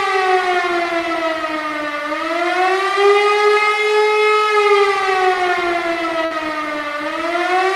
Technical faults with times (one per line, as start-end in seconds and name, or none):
6.25-6.34 burst of packet loss